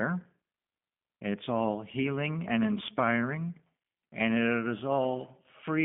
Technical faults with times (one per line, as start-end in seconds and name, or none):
0.00-5.84 G.729 codec